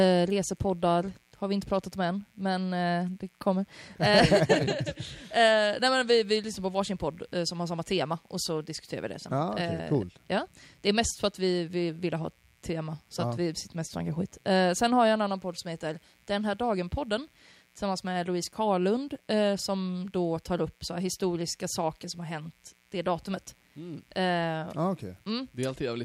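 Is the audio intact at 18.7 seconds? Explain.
No. A mains buzz runs through the whole clip, including 18.7 s: sharp switching spikes from the 60 Hz supply leak in twice per cycle, stacking harmonics into the kilohertz range. The result is a steady, raspy buzz sitting roughly 40 dB beneath the speech.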